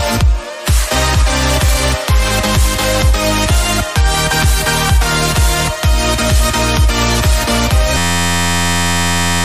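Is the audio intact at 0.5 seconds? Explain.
Yes, at 0.5 seconds the audio is intact, with nothing in its level, continuity or tone that signals a fault.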